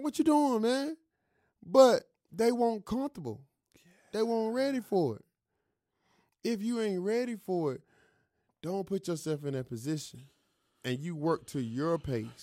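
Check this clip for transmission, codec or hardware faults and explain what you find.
No faults can be heard in this speech recording. There is nothing here to report or explain.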